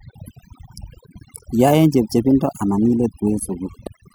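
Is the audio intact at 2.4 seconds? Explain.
No. Overdone noise removal affects 2.4 s, as it does the whole speech clip: an over-aggressive noise reducer pulls individual frequency bands down or out whenever they resemble its noise estimate. Quiet speech detail vanishes with them, leaving a lowered background that breaks up into twinkling, warbling specks.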